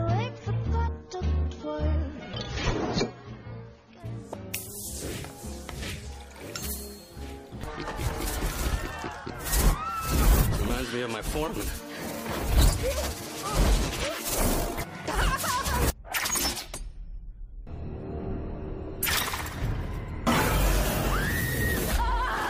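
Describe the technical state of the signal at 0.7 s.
At 0.7 s the sound is dull and thin, with nothing above about 6.9 kHz and noticeable codec smearing, until a sudden, gapless lift in clarity at 4.0 s. This is an adaptive stream starting at a low bitrate: from 0.0 to 4.0 s the player ran a cheap encoding to begin quickly, which fits AAC at around 24 kbit/s, then switched to a richer version, consistent with about 96 kbit/s, once the connection had been measured.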